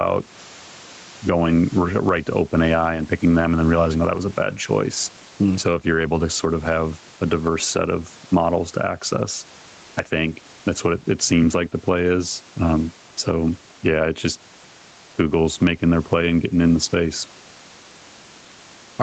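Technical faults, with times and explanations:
Throughout, gain pumping: the gain swings by around 10 dB, leaving loud and quiet passages squeezed close together in level. The likely cause is input gain set far too high, with a fast limiter or compressor clamping it on each peak. On a waveform the envelope looks flattened, with raised noise floors between bursts; a spectrogram shows the noise band brightening in gaps and dimming under each sound.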